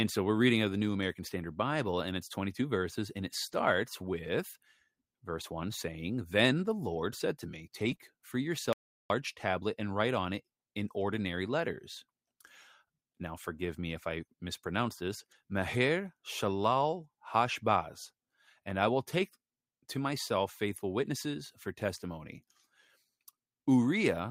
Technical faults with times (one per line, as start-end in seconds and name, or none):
3.47-3.53 lost packet rebuilt from error correction
7.79-7.93 lost packet rebuilt from error correction
7.95-7.99 short concealed packet loss
8.73-9.10 audio dropout to silence